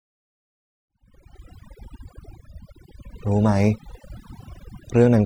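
Overdone noise removal runs the whole way through, even under the gentle fade-in ending around 1.68 s. Bands near the noise floor get gated off, taking quiet parts of the voice with them, over twinkly near-silence.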